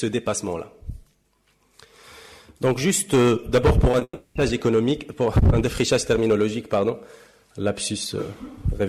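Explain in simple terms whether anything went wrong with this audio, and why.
Yes, several things went wrong. Throughout the clip there is hard clipping: the signal was pushed well beyond what one stage could handle, so a few percent of the peaks were cut flat. That flattening adds a harsh, crackly edge to the louder moments.

At 3.91 to 3.95 s and again at 3.99 to 4.03 s there is short concealed packet loss. Each time, about 20 ms of audio failed to arrive, and the receiver covered the gap by stretching out the preceding sound. Each event is heard as a brief smear or wobble.

Immediately after that, from 4.03 to 4.37 s, the original audio stops entirely. For about a third of a second it is replaced by a continuation of the last sound that fades away, ending in a short silence before the real audio resumes. This is likely a long network dropout, and the part of the audio that was lost during it does not come back.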